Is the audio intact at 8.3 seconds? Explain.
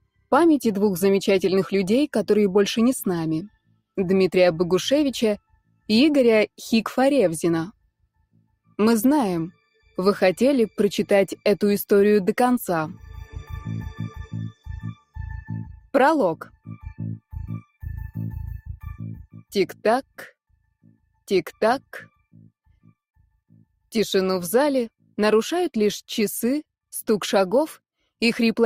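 No. At 8.3 seconds the audio sits inside a stretch, from 7.73 to 8.75 s, where the sound is cut by the noise suppressor. The suppressor judged this passage to be noise and pulled it down harder than its surroundings, reaching a drop of about 21 dB. Altogether roughly half a second of material is affected within that span. The sustained and decaying parts sink or have their tails truncated, so the level collapses audibly while any sharp onsets come through largely intact.

This happens against a background fault running through the whole clip: a noise suppressor applied to music or sounds. A speech-oriented suppressor was left engaged, and it treats steady content and ambience as noise to be attenuated. Its gain moves by something like 5 dB as the material changes, so held portions dip relative to attacks. The result is an unsteady, pumping level and a thinned-out character. The deeper cut around 8.3 s sits on top of that.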